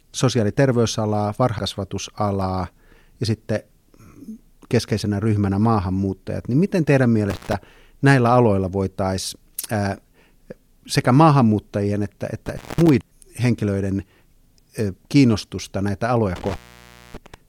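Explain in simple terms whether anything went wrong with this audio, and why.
Compressed frames skipped, at 1.58 s just after "ja terveysalaa" and again at 13.01 s: the speech jumps forward by several 32 ms chunks, losing about a fifth of a second and then about a third, because those pieces were missing or damaged and never played.

Intermittent contact, at 7.30 to 7.53 s, 12.46 to 12.89 s and 16.36 to 17.34 s: a loose connection briefly breaks, so the sound drops out for 0.14 s, 0.21 s and 0.59 s, with crackle at each edge and faint hiss in the gaps.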